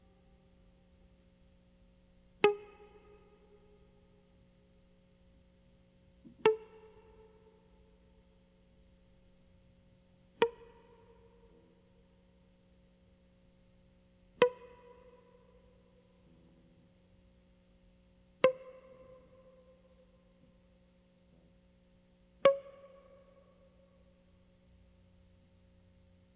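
Aliasing runs through the whole music clip. The audio was taken down from a 48 kHz rate to 8 kHz with no low-pass filter in front of the conversion. So everything above 4 kHz folded back into the band below it and came out at wrong pitches with no musical relation to the source. The folded energy sits roughly 30 dB under the music, which lends cymbals and bright attacks a gritty, metallic edge, and the spectrum stays full right up to 4 kHz.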